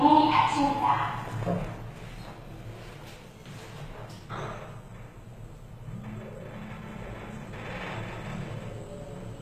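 From start to finish the treble sounds rebuilt rather than recorded. The top end is gritty and metallic, and its texture does not match the body of the sound beneath it. Nothing reaches above 14.9 kHz. The likely cause is HE-AAC compression at a rate that fits about 20 kbps. Only the lower band is coded. The highs are copied up from it and shaped coarsely, so the harmonics fail to line up.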